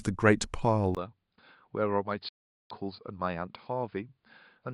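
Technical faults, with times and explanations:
0.95 to 4.73 s, input switched to a poorer device: after a brief gap of about 20 ms, the speech turns dull and boxy, with nothing above 5 kHz, and drops by roughly 10 dB. A new noise floor appears, sitting well below the speech, around 55 dB down. The narrower band, lower level and different background all point to the recording likely moving to another microphone or a headset's call profile, which carries its own response and noise.
2.29 to 2.71 s, digital broadcast dropout: the audio cuts to silence for about 416 ms and then resumes. This is the receiver muting once it could no longer decode valid data, either from losing the signal or from frames failing their checks, and staying silent until good frames returned. The length of the gap is consistent with about 13 lost frames, and whatever was transmitted during that stretch is missing rather than degraded.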